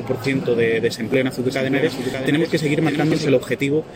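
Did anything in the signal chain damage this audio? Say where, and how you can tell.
Yes. Overlap between stream segments at the network or playback stage: tiny skips at 1.14, 2.14 and 3.12 s, about one second apart. Trimmed overlapping timestamps remove 6 to 19 milliseconds, and that regular spacing distinguishes them from random dropouts.

A doubled audio track runs from 1.50 to 3.27 s: a full-band copy roughly 5 dB quieter trails by about 0.7 s. Its abrupt start and end, with no decay or room colour, rule out reverb, likely a second, slower capture path.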